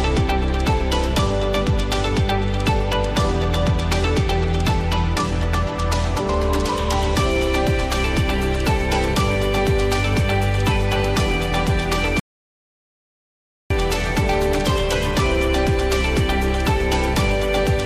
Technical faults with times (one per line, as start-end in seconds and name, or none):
12.20-13.70 audio dropout to silence